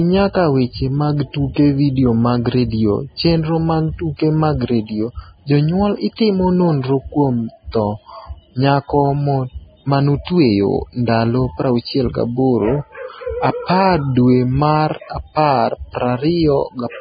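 From start to finish the speech stops dead at 4.9 kHz, and what's left below sounds hissy and grainy, with smeared consonant attacks. That's likely heavy Vorbis compression at a very low bitrate, around 14 kbps, trading fine treble detail for coarse noise.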